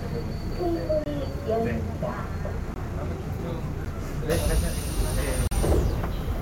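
At 1.04–1.06 s, 2.74–2.76 s, 3.85 s and 5.47–5.51 s the sound drops to a block of digital silence, as samples are replaced by zeros, likely from an unfilled output buffer. Unlike a faded dropout, each gap starts and stops abruptly. The 14 ms hole is heard as a tick.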